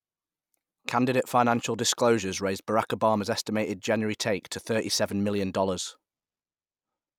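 No technical faults are audible anywhere in the recording.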